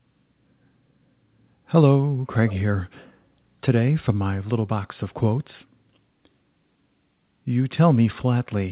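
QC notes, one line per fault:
2.47–2.56 s, echo leak: a short, faint scrap of the speech comes back on itself about 168 ms late, sitting well under the main level, roughly 20 dB down, and it's gone again within a tenth of a second. That's most likely the far end's echo canceller letting a bit of its loudspeaker pickup slip through. It's heard against the narrowband call sound, with nothing above 4 kHz, which fits a G.711 A-law path.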